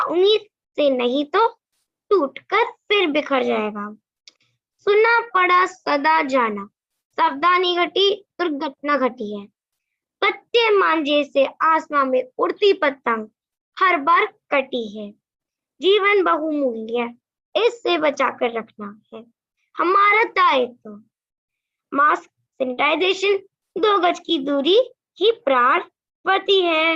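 At 22.73 to 22.79 s there is a short concealed packet loss. About 40 ms of the stream did not reach the decoder in time, and the receiver covered roughly 34 ms of that gap by extending the preceding sound before fading back into the real signal. It is heard as a brief smear or wobble. On a spectrogram, the harmonics or noise texture just before the gap repeat flatly across it.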